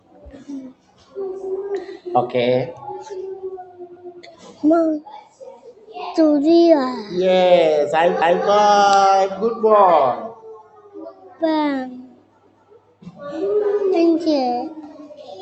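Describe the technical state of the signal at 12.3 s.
A speech-tuned noise suppressor is acting on the whole signal, treating steady tones and tails as noise, so levels pump and thin with swings of roughly 15 dB. Between 11.92 and 13.21 s, the noise suppressor cuts this sound, pulling it down by up to about 17 dB, so sustained parts sink and decays end early.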